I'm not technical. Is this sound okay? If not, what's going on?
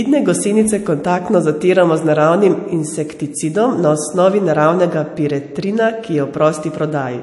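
No. The speech has MP3 compression damage from start to finish, and you can plainly hear it. The likely cause is that the file was squeezed hard to make it small. To save space, the encoder threw away everything above about 11.3 kHz, so the voice sounds dull and lacks its crisp top. It also dropped quiet detail that flickers in and out. That gives a watery, swirly edge, especially on s sounds.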